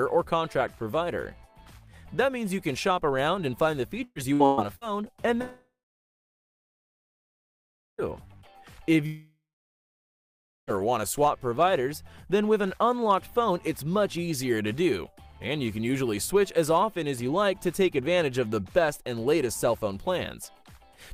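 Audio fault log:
4.03 to 4.84 s, repeated packet loss (robotic sound): this stretch gets choppy because four separate holes open up in under a second, the longest about 120 ms. Each one is papered over by stretching the last bit of sound, then the next gap hits before things settle. Around 360 ms goes missing, so nearly half the span, about 44%, is concealment rather than real audio.
5.41 to 8.01 s and 9.06 to 10.70 s, long network dropout: the audio cuts out twice for long stretches, 2.6 s and then 1.6 s, most likely because nothing was arriving from the network. Each time there's a brief smeared buzz where the last sound is carried forward for roughly a third of a second, then it goes quiet, about 2.25 s of silence in the first and 1.27 s in the second. The sound picks up again afterwards with the missing chunk simply gone.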